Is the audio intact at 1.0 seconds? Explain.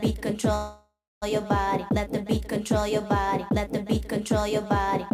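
No. At 1.0 seconds the clip is inside a call audio freeze running from 0.55 to 1.24 s. The sound just before the stall is stretched into a fading buzz or hiss that ends in about 0.23 s of silence, likely because delayed packets left the jitter buffer empty. Unlike packet loss, where audio is dropped, nothing is missing here: playback resumes exactly where it stopped, only about 0.66 s later.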